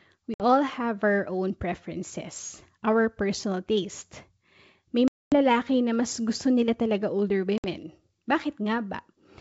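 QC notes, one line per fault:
0.34–0.43 s, 5.08–5.36 s, 7.58–7.66 s: packet loss on an ADPCM call. Hard-edged silent gaps of about 60, 240 and 60 ms, fitting a few lost packets, then around ten. The decoder's predictor and step size drift from the sender's, so the wideband G.722 sound returns with brief, slight distortion before settling.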